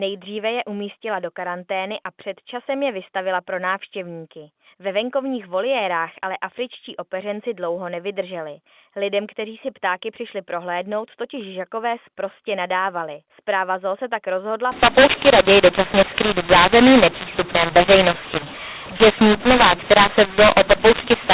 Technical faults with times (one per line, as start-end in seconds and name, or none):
14.72-21.34 mu-law and A-law mixed up